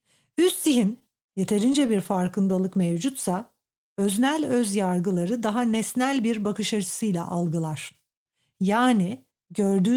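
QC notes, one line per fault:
0.99–2.65 s, repeated stalls (stutter): the speech catches and hitches eleven times across this stretch, each time briefly holding the last sound before moving on. Packets were arriving late or slower than playback, so the jitter buffer kept running dry and the receiver stretched out the previous audio to cover each wait. The gaps are short, the longest about 28 ms and 133 ms in total, roughly 8% of the span, so nothing is lost, but the flow drags and stutters.
2.87–3.64 s, jitter buffer slow-down: the speech slows to about 91% of its normal rate while pitch stays unchanged, giving drawn-out sounds. With its reserve running low, the jitter buffer had the receiver repeat individual pitch periods and pieces of pauses over and over, adding about 77 ms of audio to build its delay back up. Because whole periods are duplicated rather than resampled, the tempo drops without the pitch sagging.
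5.67–6.20 s, jitter buffer speed-up: the speech runs noticeably quicker, at about 107% of its normal rate, and sounds hurried while the pitch holds steady. The jitter buffer was holding more audio than its target, so the receiver trimmed short slices of one or a few pitch periods again and again to pull the delay down, removing a few tens of milliseconds in all. Cutting whole periods shortens the sound without raising its pitch.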